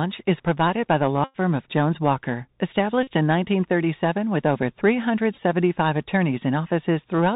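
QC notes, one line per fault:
Throughout: Bluetooth CVSD headset codec. The speech has been squeezed through the narrowband headset codec, which sends only one bit per sample at 64 kHz saying whether the waveform steps up or down, with an adapting step size. Nothing above 4 kHz survives, so the audio is dull and boxy, and the damage is plainly audible: fast high-energy sounds outrun the step, turning s sounds scratchy, with a granular hiss sitting under the speech.
1.24–1.36 s, 3.03–3.08 s and 5.33–5.38 s: Bluetooth headset packet repeated. Voice packets between headset and phone went missing, and the chip decoded the previous packet's bits again in their place. The first event covers about 101 ms of lost audio, which fits a run of roughly 27 packets, and the second covers about 41 ms. Repeating every 3.75 ms, they turn into a steady buzz near 267 Hz until good packets return. The third is scattered over 45 ms in short runs, the longest about 7 ms, totalling 26 ms, so it sounds as brief rough ticks rather than a sustained tone.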